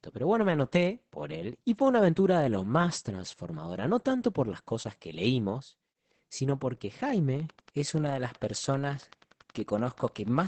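Opus voice compression in its SILK mode runs throughout, starving the excitation and cutting everything above 8.6 kHz. This fits a bitrate near 10 kbps and leaves the speech muffled, hoarse and faintly robotic.

From 7.4 to 10.38 s, just after "que leímos sino porque", a train of clicks arrives, likely from interference or a faulty connection. About thirty evenly spaced pulses at 10.4 per second tick roughly as loud as the speech.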